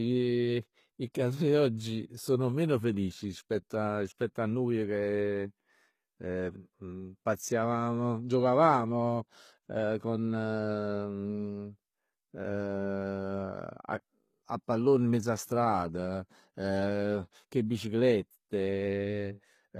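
Throughout the speech, the treble appears to be rebuilt rather than coded, likely HE-AAC compression at a low bitrate, around 20 kbps. Copied lower bands fill the top, so harmonics misalign above the crossover and s sounds come out plainly gritty and lispy.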